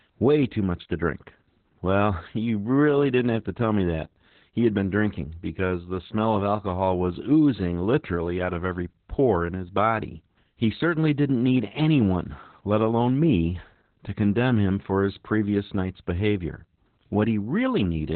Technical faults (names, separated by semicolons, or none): Opus voice compression